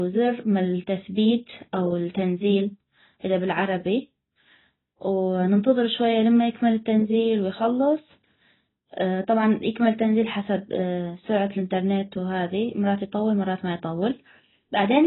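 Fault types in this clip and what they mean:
AAC compression: The speech sounds dull and smeared throughout, with nothing above 3.9 kHz. The likely cause is heavy AAC-LC coding, fitting a 16 kbps rate.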